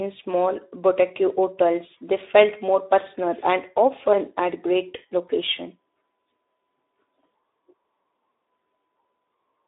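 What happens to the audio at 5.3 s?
At 5.3 s the speech is carrying Speex codec damage that runs through the whole clip. The excitation is coarsely coded, which fits a low bitrate near 11 kbps, so the voice sounds hoarse and noisy. A spectrogram shows smeared harmonics confined to roughly 300 Hz to 3.7 kHz.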